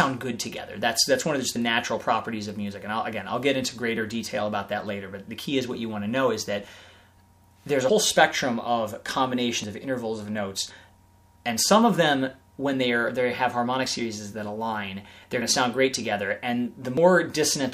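Five small forward jumps in the sound occur at 9.64, 10.70, 13.86, 15.42 and 16.97 s. Each skips a few tens of milliseconds of audio, with the last one a little longer. The likely cause is a dropped buffer (overrun): capture fell behind, the hardware overwrote unread samples, and the remaining audio was joined with no silence between. On a waveform each appears as an abrupt step discontinuity, and on a spectrogram as a thin vertical broadband line.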